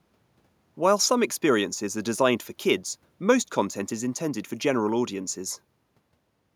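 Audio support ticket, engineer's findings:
No faults found in capture.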